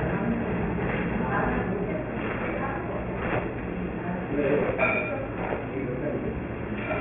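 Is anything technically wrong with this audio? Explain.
Yes. Aliasing runs through the whole clip. The audio was brought down to a much lower sample rate with no filter first, which fits a drop from 48 kHz to 6 kHz. Everything above 3 kHz folded back below that line. It lands at pitches unrelated to the original sound, roughly 10 dB under the real content. High detail turns gritty and metallic. The spectrum stays busy right up to 3 kHz, then stops dead.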